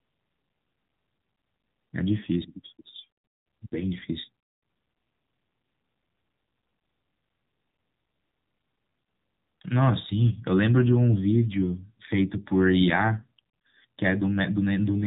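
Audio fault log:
throughout: AMR narrowband mobile codec. The speech sounds plainly buzzy and synthetic, rebuilt from a vocal-tract model driven by sparse pulses, which fits AMR-NB at 7.4 kbps. A spectrogram shows a hard ceiling at 3.8 kHz with nothing above it.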